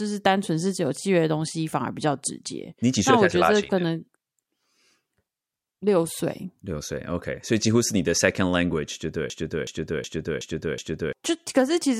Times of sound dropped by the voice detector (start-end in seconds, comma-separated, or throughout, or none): none